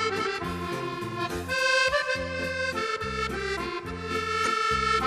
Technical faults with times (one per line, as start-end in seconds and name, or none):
4.44-4.47 corrupt frame decoded